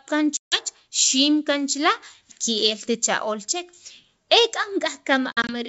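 A speech clip on a G.722 wideband call, with packet loss on an ADPCM call. Hard silent gaps hit 0.37 to 0.60 s and 5.32 to 5.56 s. The speech returns slightly distorted while the decoder's predictor resyncs.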